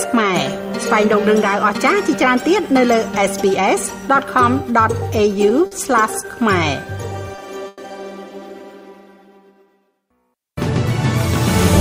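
Two short stalls from late packets occur at 5.66 to 5.73 s and 7.36 to 7.40 s: a packet missed its slot, the jitter buffer emptied, and the receiver held the last sound for 50 ms and then 20 ms, a brief smeared hold with a faint buzz or dip before the audio resumes with nothing lost. A call audio freeze follows at 7.68 to 7.80 s, likely from packets delayed in transit draining the buffer. The sound stretches into a fading buzz or hiss for 100 ms without dropping to silence, then picks up where it stopped, pushing everything later.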